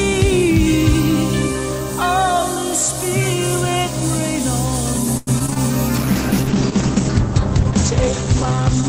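From 5.17 to 5.58 s there is repeated packet loss, producing a robotic sound. Five holes open in quick succession, the longest about 97 ms, and each is patched by stretching the preceding sound, so about 40% of that span is concealment. Unlike a single dropout, it sounds choppy rather than going briefly silent.

A call bitrate drop follows at 5.96 s and lasts to the end. The audio turns rough and watery, and the top end closes from 20 kHz down to 8 kHz, which fits the encoder falling from 64 kbps to about 10 kbps. Plain filtering would muffle the sound without this coarse, smeared texture.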